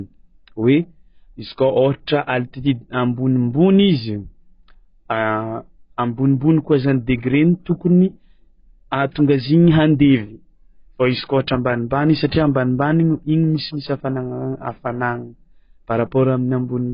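From start to finish the speech is dull and smeared, with nothing above 5 kHz and a watery, warbling texture on held vowels and a fizzy edge on sibilants. That points to heavy AAC compression, likely AAC-LC at a very low bitrate, which fits a rate around 16 kbps. The encoder discards high bands and coarsely quantises the rest. A plain low-pass filter would sound muffled but clean; the shifting, metallic swirl is what marks it as codec damage.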